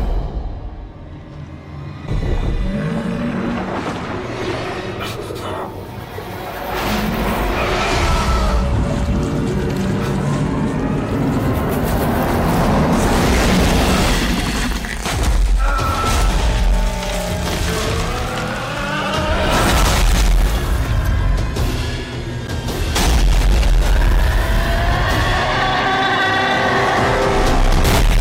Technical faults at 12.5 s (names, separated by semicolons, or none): hard clipping